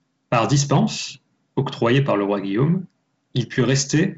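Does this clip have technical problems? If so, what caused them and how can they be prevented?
No, there are no technical problems to fix in this clip. The speech comes through G.722 wideband telephone coding at 56 kbit/s, so nothing is heard above about 7.8 kHz and a light coding texture sits on the sound.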